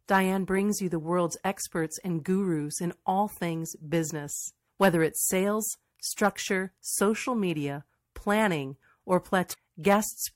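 At 9.50 s, right after "social media planning or", a brief glitch cuts into the speech and lasts about 50 ms, ending by 9.55 s. This is damaged data in a compressed stream. Part of the encoded data at that point was corrupted, so the decoder misread those frames and lost its place. It then had to search forward for the next valid frame header before normal decoding resumed.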